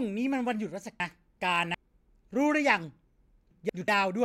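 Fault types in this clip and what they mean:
Frames out of order: neighbouring runs of frames were decoded swapped, so 1.0 to 1.75 s plays as two exchanged 371.5 ms halves and 3.51 to 3.88 s as two 185.8 ms halves. It sounds like garbled flutter. Spectrograms show formant tracks breaking at vertical seams.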